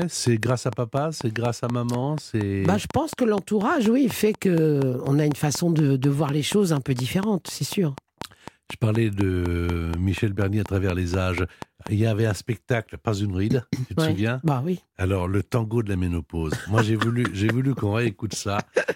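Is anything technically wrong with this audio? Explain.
Yes. A train of clicks runs from 0.02 s to 11.88 s, ending just before "il y avait un". About four clicks a second arrive at an even pace, some fifty in all. Each is roughly 10 dB above the speech. They are heard as steady ticking, in pauses too. Interference from nearby equipment is the likely cause.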